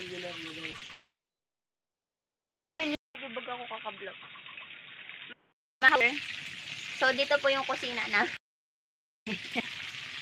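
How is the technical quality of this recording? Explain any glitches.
The recording has clear faults in its first six seconds: a cluster of brief gaps, a long silence, and then a stretch of noticeably duller, noisier sound.

Short concealed packet loss occurs at 0.71–0.75, 0.77–0.83 and 0.85–0.91 s. About 20, 40 and 40 ms of audio arrived too late, and the receiver filled each hole by extending the previous sound. The result is a quick smear or wobble. The audio never drops out in these gaps, which separates them from a dropout.

A long network dropout, likely caused by the connection stalling, runs from 0.91 to 2.81 s. The concealment first continues the last sound as a fading buzz or hiss, then gives way to about 1.7 s of silence. The audio resumes later with that whole portion missing, rather than being merely blurred.

An input switch to a poorer device, likely a fallback microphone or headset call profile, comes after a 200 ms silence at 2.95 s and lasts until 5.72 s. 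Nothing above 3.8 kHz remains, so the sound turns dull. The level also drops by roughly 5 dB, and a background noise floor appears about 30 dB below the signal. The hard band limit, the level change and the new noise together mark a change of device, not packet loss.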